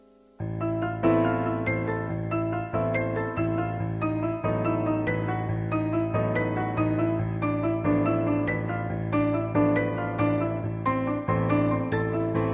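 No technical faults can be heard anywhere in the audio.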